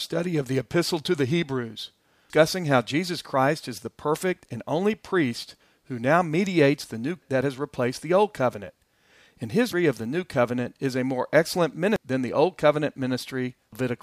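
Damaged data in a compressed stream breaks into this speech four times, at 2.30, 9.73, 11.96 and 13.73 s. At each point a stretch of the coded data is corrupt, so the decoder misreads the affected frames, loses sync and has to hunt for the next valid frame header. Each event is heard as a brief chirp, squawk, click or short hole cutting across the speech. The one at 9.73 s falls just before "of the new covenant."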